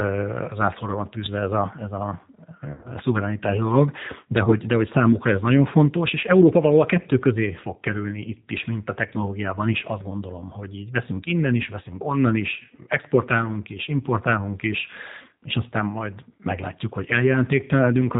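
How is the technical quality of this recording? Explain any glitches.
The recording has clear technical faults. The whole clip is degraded by a low-rate speech codec, and it has two short dropouts from lost network packets.

G.729 codec damage runs throughout. The speech sounds slightly rough and synthetic, with nothing above 4 kHz, which points to an 8 kbit/s coder. It rebuilds each 10 ms frame from a vocal tract filter, a pitch predictor and a few pulses. Fine detail is lost.

VoIP packet loss concealed by the speech codec occurs twice. The first runs from 2.73 to 2.92 s, just before "szuverenitás dolog de". About 100 ms of audio is missing, scattered over 120 ms, with the longest gap 70 ms. The second runs from 4.44 to 4.53 s, between "szuverenitás dolog de" and "de hogy számukra ez", and loses 30 ms. In each gap the decoder extends its last pitch and filter at falling gain. The sound is stretched into a buzzy tone or coloured noise that fades, then stays weak briefly afterward.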